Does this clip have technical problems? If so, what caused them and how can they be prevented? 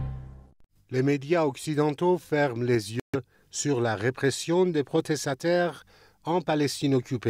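Yes. At 3.00 s the sound cuts out abruptly and stays silent until 3.16 s, and when it comes back it has moved on as if it had been playing the whole time rather than picking up where it stopped. That's the signature of a Bluetooth dropout, likely caused by a short run of audio packets failing to reach the headphones in time, so they were discarded and the output fell silent. To prevent it, keep the headphones close to the source with a clear line of sight and away from busy 2.4 GHz Wi-Fi or other wireless traffic.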